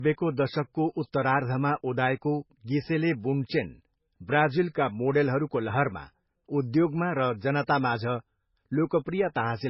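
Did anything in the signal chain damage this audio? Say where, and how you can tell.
Yes. For the whole clip the speech sounds dull and muffled, with nothing at all above about 5.5 kHz and a smeared, watery texture typical of heavy MP3 coding. The damage sits at the codec stage. The likely cause is low-bitrate audio saved at a high bitrate: the sound points to an MP3 made at a very low rate, around 16 kbit/s, then re-encoded as a high-rate MP3. The second, larger encode preserves those losses but cannot restore what the first one discarded.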